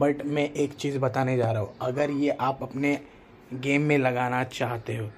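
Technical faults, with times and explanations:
No technical faults can be heard.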